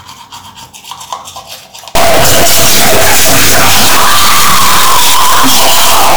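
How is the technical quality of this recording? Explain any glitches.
The recording has one serious fault. From 1.95 s to the end of the clip, the audio is badly corrupted by what sounds like a stuck bit. One bit of each sample seems pinned at a fixed value, likely because of a broken data line or a faulty converter. Wherever the waveform would naturally flip that bit, the sample jumps by the bit's weight. Here the jump is close to full scale, which points to a high-order bit. The result is harsh, buzzy distortion over everything after 1.95 s. Quiet stretches fill with loud noise because that bit would normally change with the sign of small values.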